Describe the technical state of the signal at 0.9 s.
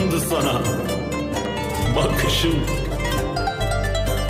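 At 0.9 s the signal is intact, with nothing there that points to a technical fault.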